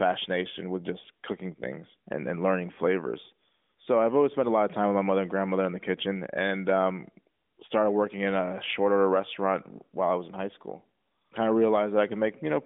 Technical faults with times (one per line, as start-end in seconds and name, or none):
none